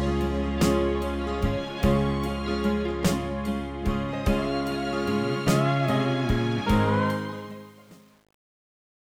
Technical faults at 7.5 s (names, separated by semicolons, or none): truncation distortion on a fade